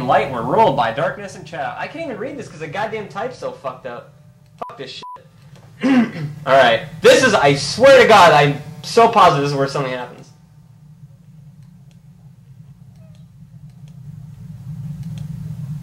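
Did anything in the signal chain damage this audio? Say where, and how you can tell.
Yes. There is zipper noise from a gain stage at the buffer level. Ticking rides on the level moves at 0.64–1.28 s (down about 10 dB), 5.2–6.4 s and 13.64–15.12 s (up about 10 dB). Gain jumps in 2 dB steps, several per second, without smoothing. Each jump clicks.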